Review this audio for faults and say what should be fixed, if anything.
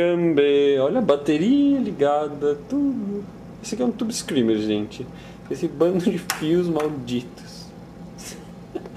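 From 4.96 s to the end at 8.97 s there is crude rate conversion. It sounds like a gritty, inharmonic fizz that tracks loud and high content, roughly 30 dB below the signal. The pattern fits a 48 kHz to 44.1 kHz change made by taking the nearest sample and dropping the rest without filtering. That periodic error creates shifted, non-harmonic copies of the sound. To prevent it, resample from the original with a band-limited resampler.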